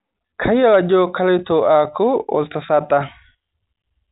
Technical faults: none

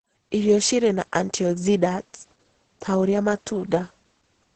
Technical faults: Opus voice compression

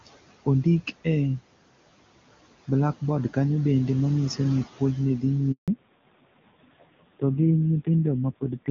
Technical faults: noise suppressor artifacts; handover gap; fallback to narrowband

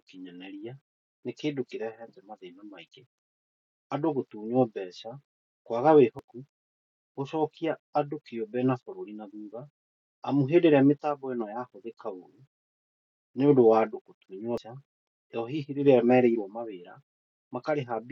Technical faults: damaged data in a compressed stream

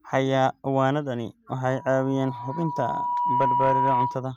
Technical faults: loudspeaker feedback squeal

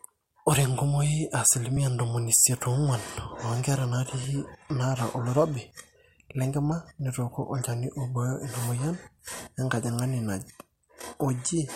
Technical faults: audio missing between chunks

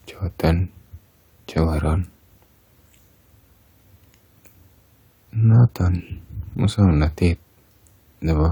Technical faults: none

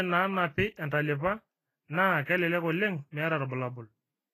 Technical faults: Vorbis compression

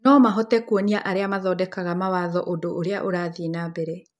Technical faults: none

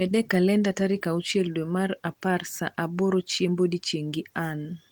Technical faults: none

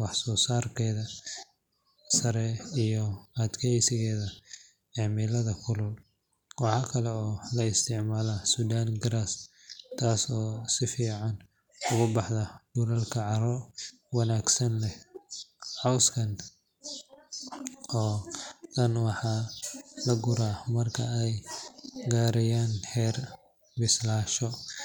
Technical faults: none

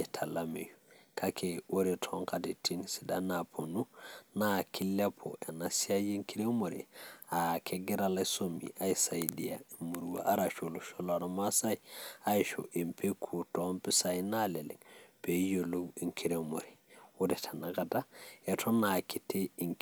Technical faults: none

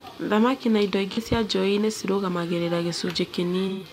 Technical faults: AAC frame loss with concealment

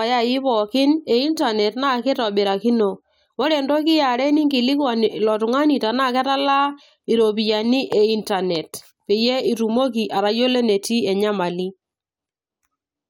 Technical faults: none

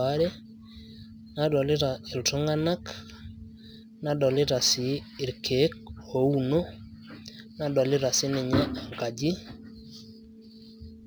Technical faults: sample clock jitter

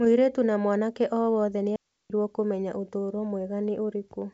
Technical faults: digital wireless dropout

